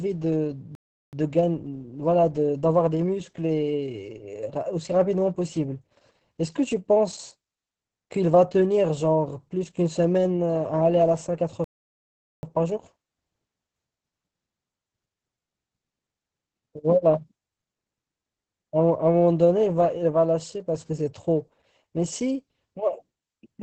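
From start to finish the speech carries Opus voice compression in its SILK linear-prediction mode, and damage is heavy. Nothing sounds above about 8 kHz, so the audio is held to a wideband ceiling and lacks air and sibilant sparkle. The excitation is coded coarsely, leaving the speech muffled and hoarse, with a faint robotic edge. Those artefacts point to a very low bitrate, consistent with roughly 10 kbps in 20 ms frames.

At 0.75 s a playback stall cuts the sound off mid-flow for 0.38 s, and it resumes at 1.13 s. A longer playback stall runs from 11.64 s to 12.43 s, a gap of 0.79 s. Both are abrupt silences inside continuous speech, most likely the player running short of data or its output thread being blocked until it recovered.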